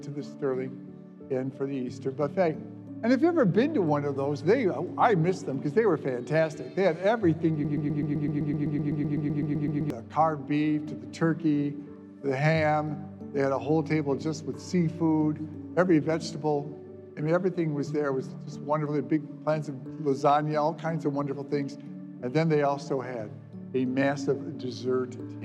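From 7.65 to 9.90 s, a 127 ms fragment stutters through 18 exact repeats, a broken-record loop, likely from a stalled player resending its last fragment.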